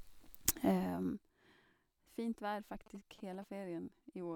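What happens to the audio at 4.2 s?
At 4.2 s the speech carries on intact, with no dropout, click or sudden jump in level.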